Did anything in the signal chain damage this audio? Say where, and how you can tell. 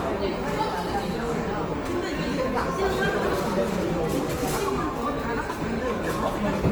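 Yes, at the codec stage, across the whole clip. Tonal parts of the sound come out rough, grainy and noisy, while the top end still reaches about 20.2 kHz, so the damage is texture rather than lost treble or swirling gaps. The likely cause is Opus compression in its music (CELT) mode at a low rate, around 24 kbps. Short of bits, the encoder preserves each band's energy but rebuilds its fine detail by copying lower bands or inserting noise, and that substitution is the grain you hear.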